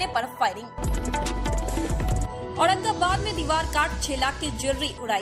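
Nothing in this audio stands out as a technical fault; it just runs along without any glitch, dropout or odd artefact worth pointing to.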